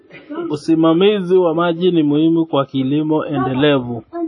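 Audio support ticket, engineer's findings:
Throughout: ringing, washy speech, hiss breathing with level, nothing above 10 kHz. Spectrogram: hard ceiling, smeared onsets, gappy weak bands. Likely WMA compression at a low bitrate, around 32 kbps.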